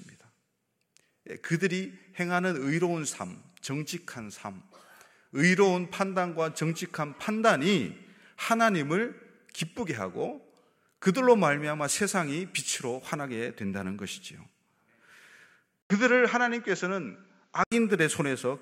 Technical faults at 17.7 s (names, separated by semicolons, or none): input switched to a poorer device